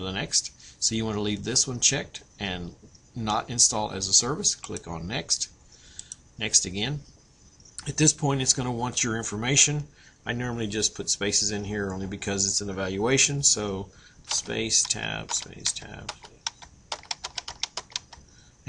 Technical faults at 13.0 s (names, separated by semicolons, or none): none